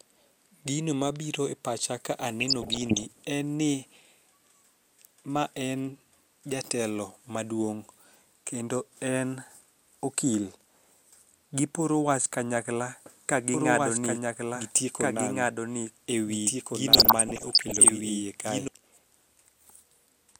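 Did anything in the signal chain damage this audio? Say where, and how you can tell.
Yes. In the codec stage of the DAB receive chain, DAB burbling appears from 2.40 to 3.03 s and from 16.91 to 17.91 s. Bit errors slipping past error correction corrupt MP2 samples and scale factors, so individual sub-bands jump in level frame by frame, producing short noise blips over the speech.

From 13.54 to 18.68 s there is a doubled audio track. A full-band copy trails about one and a half seconds behind, roughly 5 dB quieter, with no reverberant tail, and it starts and stops abruptly. It is likely a second, slower capture path or an out-of-step edit.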